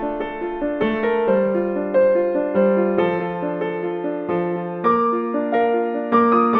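Nothing is technically wrong with this audio.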